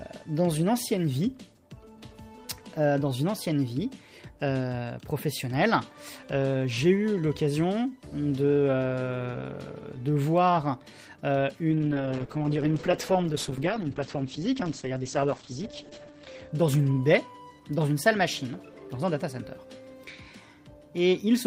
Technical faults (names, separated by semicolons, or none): call bitrate drop